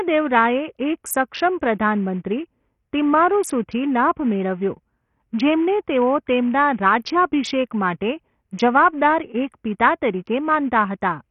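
A speech recording carrying Bluetooth SBC compression from start to finish, most likely from a low bit pool, with heavy damage that points to a bitrate around 48 kbps. Nothing survives above 14.6 kHz, the remaining treble flickers in and out, and coarse quantisation leaves gritty noise and aliasing on the sound.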